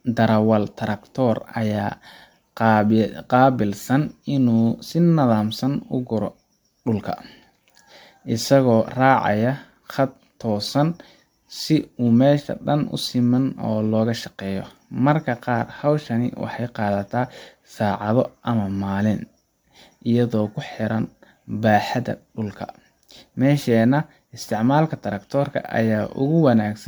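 Generation loss runs throughout the speech, which sounds swirly, smeared and hollow, with blurred consonant attacks and nothing above 19.9 kHz. The likely cause is roughly ten rounds of MP3 decoding and re-encoding near 134 kbit/s, each pass adding fresh quantisation noise and spectral holes.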